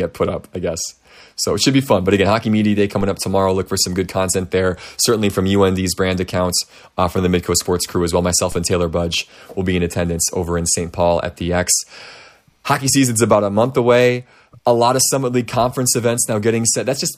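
A speech recording with two kinds of fault. DC steps at 3.01 s, just before "up tomorrow", and 8.52 s, right after "crew as well", are low thumps where the waveform's zero line jumps, then decays away through a roughly 5 Hz high-pass. Damaged data in a compressed stream at 8.72 s and 16.34 to 16.37 s gives brief glitches as the decoder misreads corrupted frames and resynchronises on the next header.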